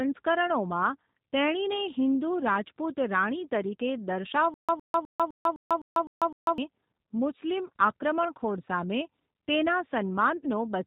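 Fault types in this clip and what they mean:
G.729 codec: The whole recording passes through an 8 kbit/s speech codec that rebuilds the voice from a filter, a pitch predictor and a few pulses per frame. Nothing above 4 kHz survives. The speech sounds muffled, slightly rough and synthetic, with plainly audible damage.
Stutter with silent gaps: From 4.54 to 6.58 s, a fragment of about 109 ms repeats eight times. Each repeat is followed by about 146 ms of dead silence, so a burst returns every 255 ms. The audio due in that span is lost. A stalled player or stream retrying is the likely cause.
VoIP packet loss concealed by the speech codec: At 10.37 s, about 60 ms of audio goes missing, which fits two lost packets. The decoder fills the hole by stretching the previous sound into a fading tone or noise. The voice stays weak or distorted until about 10.47 s.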